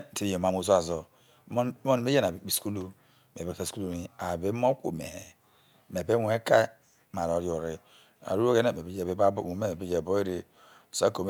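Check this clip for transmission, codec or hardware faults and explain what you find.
Nothing stood out on listening to this speech recording.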